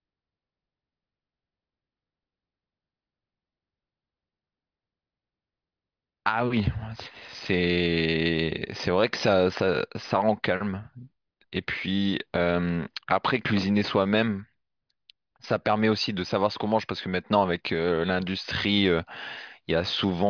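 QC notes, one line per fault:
No technical faults can be heard anywhere in the speech recording, and the signal stays steady and continuous throughout.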